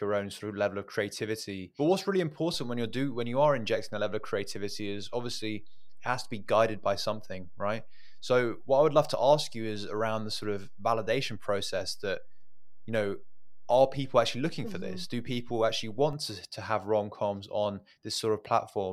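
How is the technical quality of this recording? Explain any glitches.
The recording has one fault, a DC step. At 2.54 s, after "what's really", the waveform's zero line shifts by about -38 dBFS, as if an offset were switched into the signal path. It holds until 16.13 s, before "to to have rom", then returns. Each transition is a brief low thump beneath the unchanged speech.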